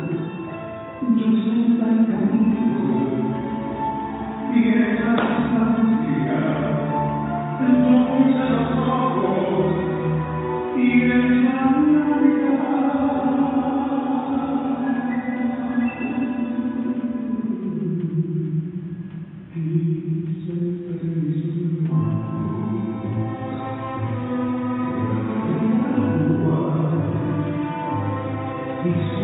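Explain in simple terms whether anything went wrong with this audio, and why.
Nothing went wrong here.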